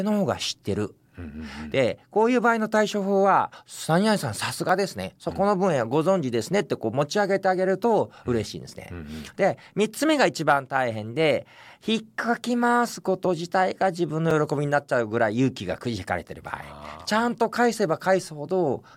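At 4.69 s and again at 14.31 s, the speech drops into a block of digital silence, about 0.6 ms and then 5.33 ms long. The second gap fits a 256-sample block. Samples were zeroed with no fade, so each gap sounds like a tick. A waveform shows a brief flat line, and a spectrogram shows a thin vertical broadband stripe at each abrupt edge.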